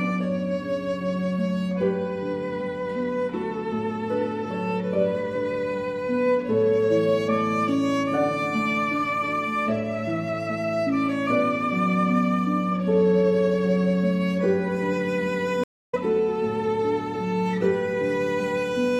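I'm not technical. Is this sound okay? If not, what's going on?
No. There is a stream reconnect at 15.64 to 15.95 s. The connection carrying the audio briefly dropped, so the player went silent for about a quarter of a second, then reconnected and started decoding again from scratch. Because the stream kept moving while it was cut off, the sound picks up roughly a fifth of a second further along, so a small piece is skipped rather than paused.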